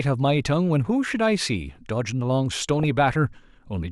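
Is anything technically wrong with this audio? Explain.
Yes, there's a stretch of DAB burbling in this speech, from about 2.56 to 2.84 s. Weak reception let bit errors slip past the error correction into the MP2 data, a rate of well under one percent by the sound of it. Corrupted samples put short blips of noise in single sub-bands, and corrupted scale factors make sub-bands jump in level for up to a frame, so for that quarter-second or so you get burbling over the speech, consistent with around a dozen damaged frames.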